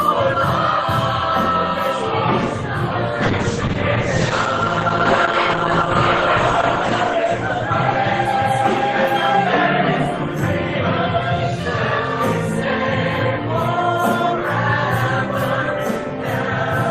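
The audio has a call bitrate drop from 3.2 to 9.59 s. Highs are cut above 8 kHz. The roughness points to the encoder falling from about 32 to 9 kbps.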